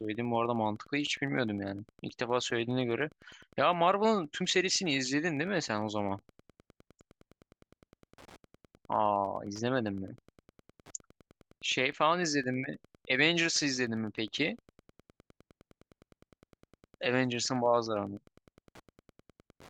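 A nearby Wi-Fi radio is coupling into the audio circuit, which rectifies its beacon sent every 102.4 ms. Throughout the speech this produces Wi-Fi interference, a steady ticking close to ten times a second, sitting roughly 30 dB below the voice.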